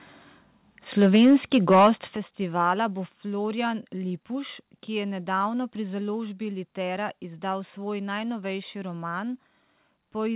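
From 1.01 to 1.9 s, just before "festivala bo", the loudest syllables carry a harsh, crackling edge, most likely microphone overload. Peaks drive about 7 dB past the converter's ceiling, and around a tenth of the waveform has its tops flattened. Unlike codec grit, which sits evenly under all the sound, this crackle follows the loud moments and disappears on quieter ones. The band-limited sound, with nothing above 4 kHz, fits a G.711 A-law call path, and that dullness is separate from the crackle.

Three sudden level drops follow, likely the microphone volume being stepped down by the call software. The first comes at 1.16 s, about 2 dB, in the middle of the overloaded stretch. The largest comes at 2.16 s, about 9 dB, just before "festivala bo". The last comes at 3.18 s, about 2 dB, right after "festivala bo". Each is an instant step that lowers the voice and the background together. An automatic gain fade would slide gradually, and a quieter talker would leave the room noise unchanged, so these abrupt, uniform steps point to a gain change at the input.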